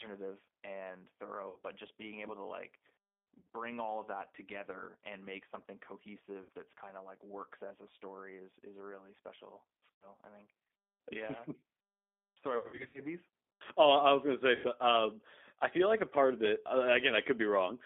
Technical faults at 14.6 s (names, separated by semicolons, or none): G.729 codec; VoIP packet loss concealed by the speech codec